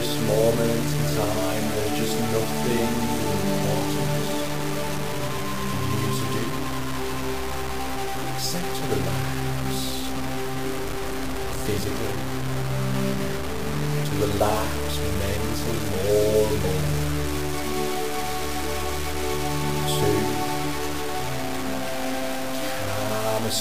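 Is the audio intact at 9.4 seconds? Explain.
No. At 9.4 seconds, as throughout the clip, there is grainy distortion that tracks the sound, likely low bit depth without dither: truncation to about 4 bits leaves error only about 10 dB below the signal. The waveform shows coarse stair-steps; the spectrogram shows broadband hash following the signal's envelope.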